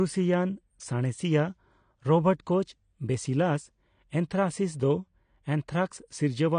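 Throughout, the speech sounds dull and smeared, fizzy on sibilants, with nothing above 9.7 kHz, likely from AAC compression at a bitrate near 32 kbps.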